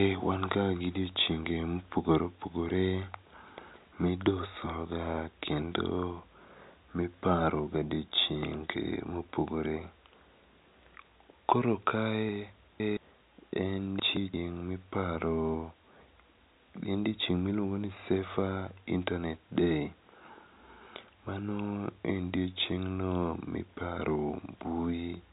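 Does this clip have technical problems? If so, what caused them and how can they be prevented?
Yes: chunks out of order. Audio blocks of about 170 ms were written late, so each plays after the material that should follow it. This jumbles the speech at 3.41–3.76, 12.29–12.97 (apparently displaced by several chunks), 13.99–14.34 and 16.38–16.73 s, all heard through narrowband G.711 telephone coding. To prevent it, sequence-number each chunk and reorder in a jitter buffer before playback.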